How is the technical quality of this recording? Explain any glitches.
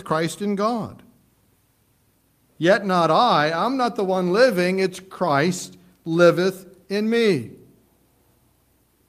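Nothing in the recording stood out as a technical problem on listening.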